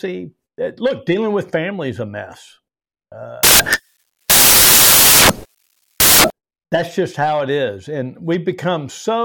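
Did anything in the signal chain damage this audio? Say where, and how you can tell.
Yes. The damage sits in sample-format conversion: from 3.43 s to 6.30 s the samples are built from the wrong bytes, with each sample's bytes assembled out of order or misaligned by one. The rapidly changing low-order bits end up as the most significant part of every value, so the speech is replaced by loud, harsh broadband noise. Clean speech returns at 6.30 s with "that's just how it".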